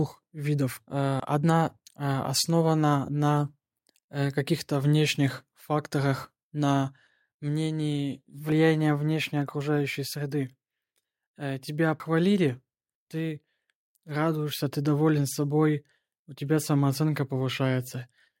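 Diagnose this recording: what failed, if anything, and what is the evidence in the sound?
Jumps at 1.2 s, 8.52 s and 12.0 s, each with the speech skipping ahead and no silent gap: roughly 40 ms skipped at the first two, about a tenth of a second at 12.0 s. Likely a dropped buffer (overrun) at the driver/buffer stage, where unread samples were overwritten and the remaining audio was joined directly. A network dropout would leave silence or concealment instead.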